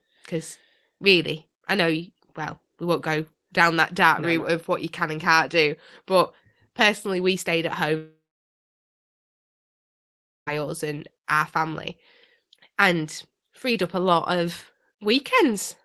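Right after "personally we stayed at", at 7.97 s, the speech gives way to a brief buzzy continuation of the last sound that fades within a few tenths of a second, then about 2.3 s of silence until speech resumes at 10.49 s with "us and our family", some of what was said in between simply gone. This is a long network dropout, likely caused by about 2.5 s of audio never reaching the receiver, which briefly extended the last sound before falling silent.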